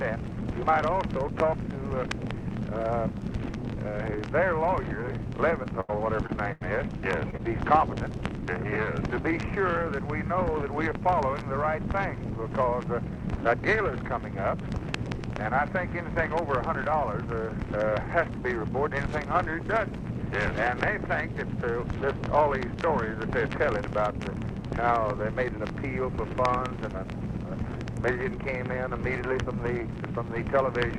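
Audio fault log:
5.63–7.41 s, short concealed packet loss at 5.63–5.67, 6.27–6.31, 7.30–7.35 and 7.37–7.41 s: each time about 20 ms of audio arrived too late to decode, and the receiver patched the hole by extending the preceding sound before blending back. Each gap is heard as a brief smear or wobble.
5.81–6.62 s, burst of packet loss at 5.81–5.91 and 6.53–6.62 s: a run of about 80 ms went missing each time, and the receiver stretched the last sound across it while fading it down. The result is a short held buzz or dying hiss, after which the audio picks up further on with that stretch absent.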